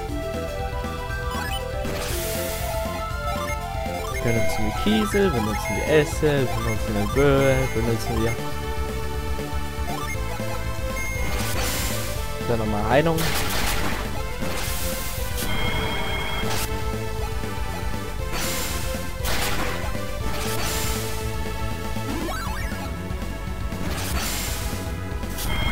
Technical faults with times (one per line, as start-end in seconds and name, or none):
none